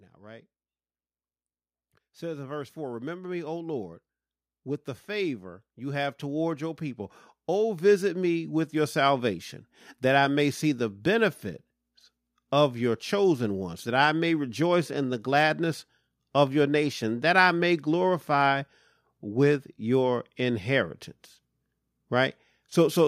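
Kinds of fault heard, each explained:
Automatic gain rising: from 2.19 s to 9.29 s the speech and the background around it swell together, growing about 13 dB louder over roughly seven seconds, because the automatic gain control judged the input too quiet and slowly raised its gain.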